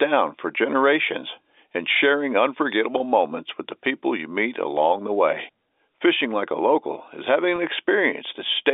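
At 2.98 to 3.00 s and again at 7.56 to 7.58 s, the speech briefly catches on a held, slightly buzzy tone before carrying on. This is packet loss with pitch repetition: each gap of about 20 ms, which fits a single lost packet, was bridged by repeating the last pitch period. The gaps are short enough that the repeat sounds like a frozen sliver rather than silence, heard over the narrow G.711 telephone band.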